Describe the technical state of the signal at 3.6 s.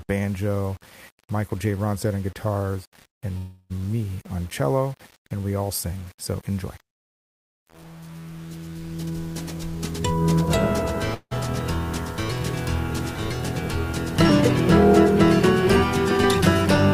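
At 3.6 s you're inside a call audio freeze running from about 3.37 to 3.79 s. The last sound gets stretched into a fading buzz for roughly a third of a second, likely a jitter buffer running dry, then it picks up exactly where it stopped, with nothing lost. Underneath, there's the grainy, signal-following grit of low bit depth without dither, which fits a likely rounding to 7 bits, with the error around 30 dB below the signal.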